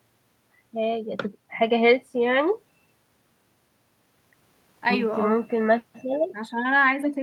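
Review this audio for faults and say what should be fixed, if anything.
Nothing here needs fixing; no faults were heard anywhere in the speech.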